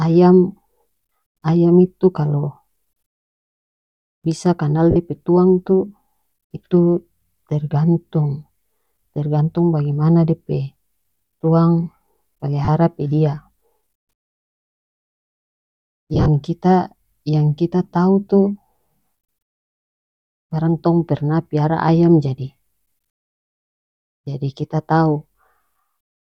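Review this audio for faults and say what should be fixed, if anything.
Lost LE Audio frames at 4.91 s (50 ms), 12.65 s (30 ms), and 16.14 to 16.28 s, where short gaps are scattered over 140 ms. The LC3 decoder patches each gap with the last spectrum under random signs, so the speech turns into a brief noisy smear. Strengthening the Bluetooth link, with a closer device and less interference, would prevent these losses.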